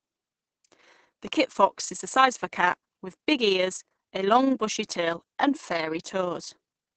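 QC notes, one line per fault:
Throughout, overlap-add ripple: the level swells and dips about 6 dB roughly thirty times a second, a rough flutter. The speech was rebuilt from windowed frames whose overlap does not sum evenly, so gain rises and falls once per frame.
Throughout, Opus voice compression: the speech sounds muffled and slightly hoarse, with plainly audible coding damage. Nothing is heard above about 8.5 kHz, which fits a wideband SILK setting near 12 kbps. Excitation is coded coarsely in 20 ms frames, roughening the tone.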